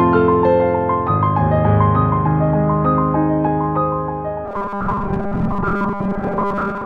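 From 4.45 s to the end, the sound collapses into a robotic sound from repeated short buffers: a rigid, metallic buzz at 200 Hz. The likely cause is audio arriving too seldom, with roughly 5 ms segments looped over most of that stretch while the real signal is skipped.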